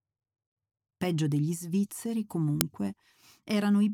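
At 2.61 s there is an uninitialised buffer. A block was played before any audio had been written into it. Leftover memory came out as samples. It sounds like a brief, harsh click of digital noise. Its length of about 1.45 ms fits a 64-sample block.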